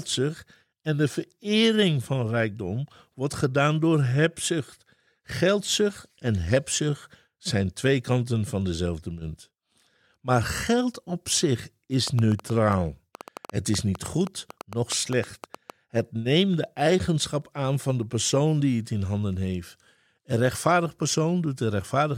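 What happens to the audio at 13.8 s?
At 13.8 s you're right in the middle of a train of clicks running from 12.08 to 15.71 s, just after "geld op zich is". Around thirty similar pops arrive unevenly, about 6.6 per second, peaking roughly 10 dB above the speech, likely from interference or a faulty connection or power supply.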